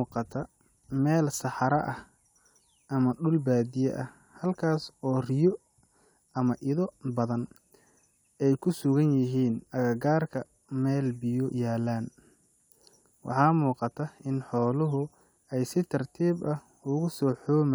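Speech recording; no technical faults detected.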